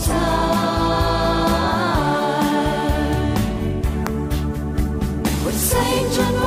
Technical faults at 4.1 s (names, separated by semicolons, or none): electrical switching spike